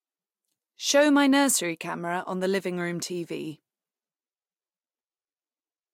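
No technical faults are audible anywhere in the speech.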